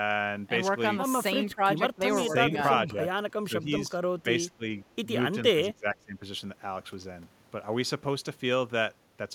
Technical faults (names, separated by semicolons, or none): speech suppressed in double talk